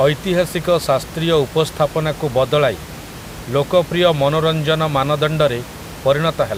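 A speech recording with nothing technically wrong with it, the room noise about 16 dB below the speech being part of the recording itself.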